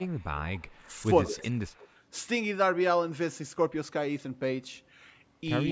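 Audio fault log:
0.00–0.07 s, 0.84–0.89 s and 1.29–1.56 s: speech suppressed in double talk. The speech briefly sinks, by roughly 15 dB in the first spot and about 10 dB in the others, and thins out while the far side is also active. This is likely an echo canceller that could not tell the near talker from the loudspeaker echo and so attenuated both. On a waveform the envelope shows sudden notches. On a spectrogram the upper harmonics fade in short vertical gaps.
0.09–0.26 s, 0.54–0.77 s, 1.25–1.88 s and 5.68–5.72 s: echo leak. A delayed copy of the voice trails it by about 187 ms, and by 189 ms at the very end. It sits at about -35 dB, then about -25 dB, about -15 dB and about -20 dB relative to the speech, so the 1.25–1.88 s stretch is the most audible. Likely cause: a loudspeaker-side canceller letting residual echo through. On a spectrogram, ghosted harmonic traces repeat the formant pattern offset by that delay, and the content stays below the 8 kHz call-processing limit.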